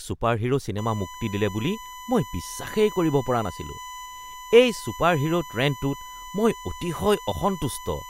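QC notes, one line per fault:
0.78–8.09 s: USB whine, a fixed 1 kHz tone about 15 dB under the speech, from 1 ms bus frames leaking via power or ground, far above mains hum.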